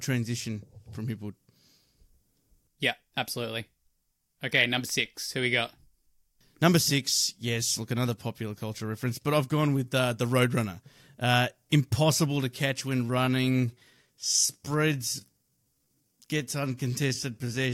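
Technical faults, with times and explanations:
13.02 to 17.73 s, time-stretched section: Right after "impossible to catch", the pace abruptly drops to about 0.71 times normal speed and stays there to the end. The pitch does not fall with it. That mismatch points to a stretch that likely came from editing software fitting the audio to a longer length. The software fills the extra time by repeating tiny slices of sound.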